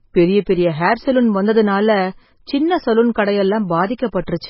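MP3 compression runs throughout the speech: nothing survives above 5.6 kHz, and the heavy damage, with weak frequency components dropping in and out between frames, gives a watery, swirly texture and smeared attacks, likely from an encoder starved of bits, fitting roughly 16 kbps.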